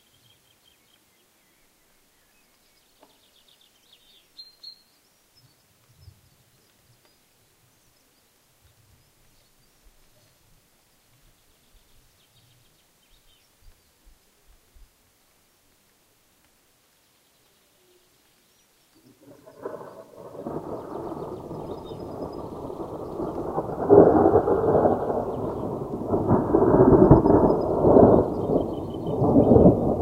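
No faults to report: the sound here runs without any audible dropout, glitch or level problem from beginning to end.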